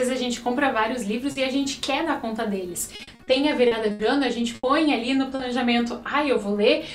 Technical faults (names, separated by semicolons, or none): short concealed packet loss; repeated packet loss (robotic sound); burst of packet loss